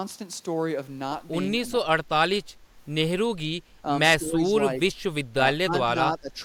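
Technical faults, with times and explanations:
3.43–3.48 s, 4.19–4.49 s, 5.63–5.96 s and 6.12–6.39 s: speech suppressed in double talk. The echo canceller, likely caught with both ends talking at once, could not separate the near talker from the loudspeaker echo and turned the whole signal down. The speech sinks by roughly 15 dB at 3.43, 5.63 and 6.12 s and about 10 dB at 4.19 s. These are gated dips, from a brief 50 ms duck to stretches of up to about a third of a second.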